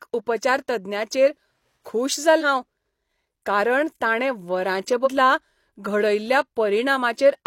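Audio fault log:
2.37–2.42 s: compressed frames skipped. Roughly a fifth of a second of speech vanishes; the audio jumps ahead because those frames were never played.
5.02–5.08 s: compressed frames skipped. About a tenth of a second jumps forward; the missing frames are skipped over at the join.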